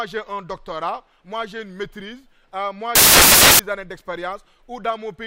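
From 2.95 to 3.59 s the audio turns into loud broadband noise, caused by samples built from the wrong bytes. The decoder assembled each sample incorrectly, whether from a one-byte offset, swapped byte order or a mismatched alignment, so the rapidly changing low-order bits became the dominant part of every value. On a spectrogram the span appears as a block of energy spread across the whole frequency range with sharp edges. On the waveform it is a dense, noise-like slab that stands out abruptly from the material on either side.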